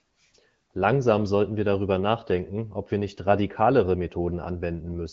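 No technical faults can be heard anywhere in the recording. The speech comes through the AMR wideband (HD Voice) codec with only light coding damage and no content above 7.4 kHz, which fits one of its higher rates, around 15.85 kbit/s.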